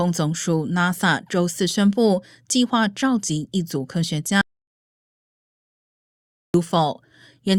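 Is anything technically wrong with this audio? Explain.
Yes. An audio dropout to silence runs from 4.41 to 6.54 s: the speech cuts off mid-flow into about 2.1 seconds of silence with no room tone, then resumes abruptly. The likely cause is a lost input while recording continued writing zeros.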